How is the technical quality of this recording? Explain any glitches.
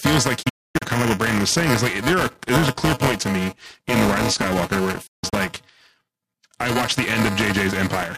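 The quality is poor: a steady buzz runs under the speech throughout, and the sound twice drops out briefly.

Throughout, there is buffer tearing. The writer and reader of the audio buffer cross inside each period, splicing in audio about five milliseconds stale. This produces a rattling 375 Hz buzz, which fits a 128-sample buffer. It sounds only while speech is present, which separates it from hum.

From 0.42 to 0.82 s and from 5.06 to 5.34 s there is digital broadcast dropout. The receiver lost valid frames and muted, with quick 8 ms fades into several short holes totalling about 320 ms and 190 ms. Unlike tearing, the audio is simply absent there.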